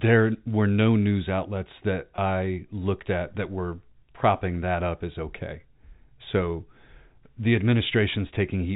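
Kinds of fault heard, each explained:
Packet loss with pitch repetition: at 2.16 to 2.18 s the speech briefly holds a slightly buzzy, sustained tone for 20 ms. The receiver filled the gap by repeating the last pitch period, which fits a single lost packet. Unlike a dropout, there is no silent hole or click. Unlike a codec warble, it is one short, frozen repetition of the previous sound, heard against the narrow telephone band of the G.711 coding.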